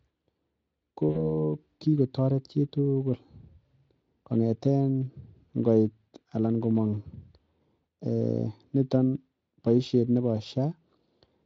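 From 1.09 to 1.23 s, just before "kikotoret chi tugul", VoIP packet loss concealed by the speech codec: about 60 ms of packets vanished, and the Speex decoder extrapolated its last pitch and filter, smearing the speech into a fading buzzy tone or coloured noise before recovering.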